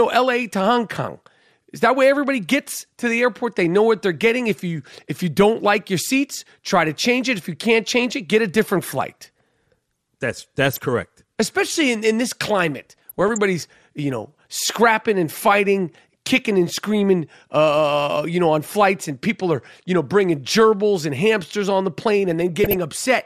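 From the start the speech sounds dull and gurgly, likely from MP2 compression at a low rate, consistent with about 80 kbps, where starved sub-bands drop out. A spectrogram shows the upper bands cut off and blinking on and off. DAB burbling, where bit errors corrupt sub-band samples and scale factors, appears at 10.73–10.86 s, at 12.90–13.38 s after "in in this" and before "you know scrapping and", and at 22.64–22.83 s. It sounds like short blips of noise, visible as isolated bright blocks flaring frame by frame.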